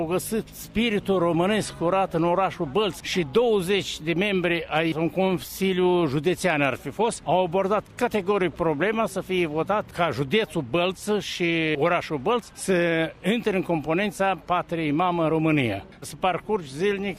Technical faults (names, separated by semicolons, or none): none